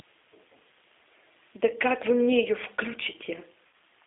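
A switching supply whistle runs from start to end: a converter drifting in burst mode leaves a thin, high tone wandering between about 3.83 and 3.85 kHz, roughly 10 dB below the speech.

The G.729 codec shapes the whole clip, limiting the line to 300 Hz to 3.5 kHz. The speech is rebuilt from a filter, pitch predictor and a few pulses per frame, which fits an 8 kbit/s G.729A stream. It comes across as plainly rough and slightly synthetic.

VoIP packet loss concealed by the speech codec appears from 3.67 to 3.72 s. About 60 ms of audio went missing, which fits roughly three lost packets. The decoder extended its last pitch and filter with falling gain, smearing the speech into a fading buzzy tone or coloured noise that stays weak just afterwards.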